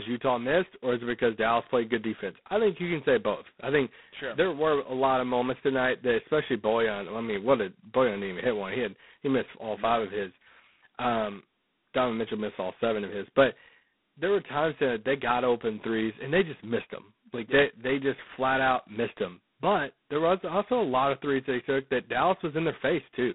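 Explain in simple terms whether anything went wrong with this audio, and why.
Something did go wrong, from start to finish. The speech passed through G.726 ADPCM, a phone coding that saves only a rough difference from a guess of each next sample. It was squeezed hard. That leaves a harsh, rasping hiss that swells with the speech. Nothing above about 3.9 kHz survives, so it sounds thin.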